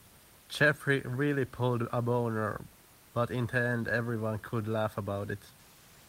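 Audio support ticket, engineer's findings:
Engineer's findings: no fault found in this speech clip, with room noise sitting about 30 dB below the speech.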